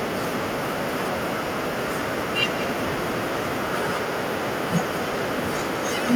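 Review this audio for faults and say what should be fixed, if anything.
The far end is playing the call through a loudspeaker, its microphone is picking that playback up, and no canceller is removing it, so this is echo with no canceller across the whole clip. The speech returns after the network round trip, roughly a fifth of a second late and about 12 dB below the original, as a thinner copy trailing every phrase. Enabling acoustic echo cancellation on the far-end device, or having that side use a headset, would stop the return path.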